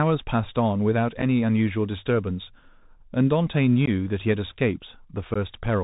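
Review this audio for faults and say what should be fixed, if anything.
Bluetooth CVSD headset codec, throughout: the speech has nothing above 4 kHz. Loud high-frequency sounds outrun the adaptive step and distort, sibilants sound scratchy, and granular hiss sits underneath, which fits a 64 kbps CVSD link. To prevent it, negotiate a wideband headset codec such as mSBC or LC3 instead of CVSD.

Unconcealed Bluetooth headset packet loss at 1.22 s, 3.86 to 3.89 s, and 5.34 to 5.37 s: lost voice packets were replaced by silence or an idle pattern, leaving abrupt holes of 7.5 ms, 15 ms, and 15 ms. These fit one lost packet, then about two lost packets each time. To prevent it, keep the headset's radio path short and unobstructed, and enable packet loss concealment on the receiving side.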